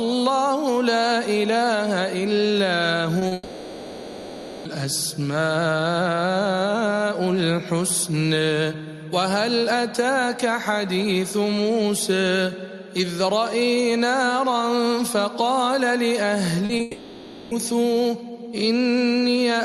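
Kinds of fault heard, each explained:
Short concealed packet loss: Brief gaps of 20 to 40 ms never reached the decoder in time. The receiver covered each one by extending the preceding sound and blending back into the real audio. Here they come in pairs, at 3.19 and 3.27 s and again at 16.65 and 16.77 s, and each is heard as a quick smear or wobble. Both pairs sit right before a longer break.
Long network dropout: Audio stopped arriving for a long stretch, likely because the network connection dropped out, and that part was never played. The receiver kept extending the last sound to fill the gap. From 3.33 to 4.67 s, about 1.3 s, and from 16.81 to 17.53 s, about 0.7 s, the filled-in sound stands in for the missing audio. It never falls to true silence, and the audio comes back without the lost portion.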